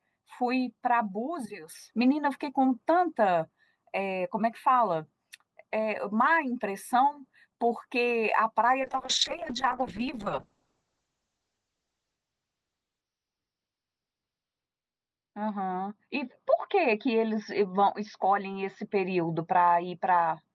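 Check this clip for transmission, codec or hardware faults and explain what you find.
One transmission fault is present, a call bitrate drop. From 8.83 s to the end of the clip, the encoder is starved of bits. It codes coarsely, and the audio band narrows from 20 kHz to 6 kHz, which fits a fall from about 32 to 6 kbps. The speech turns rough, watery and muffled, worst for roughly 5.8 s.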